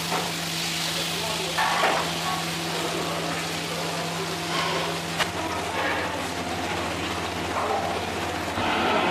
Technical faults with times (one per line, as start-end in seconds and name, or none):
0.00-2.04 time-stretched section